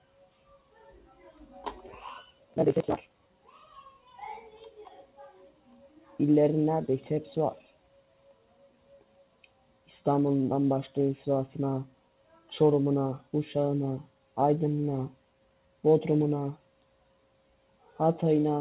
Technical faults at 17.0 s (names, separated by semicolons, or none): noise suppressor applied to music or sounds; sound cut by the noise suppressor